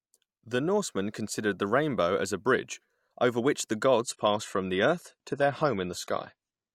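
From 4.03 s, just after "bridge over which the", the speech switches abruptly to an adaptive stream at a lower bitrate. Nothing survives above 13.9 kHz and codec artefacts thicken, which fits a step down from about 96 to 32 kbit/s. It never recovers before the end.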